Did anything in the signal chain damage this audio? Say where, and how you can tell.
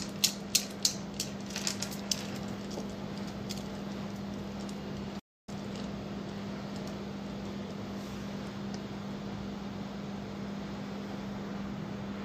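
Yes. At the playback stage, the player most likely ran dry of buffered data, or its output thread was held up, so nothing reached the output for a moment. That is a playback stall: the sound cuts out abruptly at 5.19 s and stays silent for about 0.28 s, resuming at 5.49 s. The gap is clean digital silence in mid-flow rather than a fade or dropout noise, which marks a delivery hold-up rather than damage to the signal.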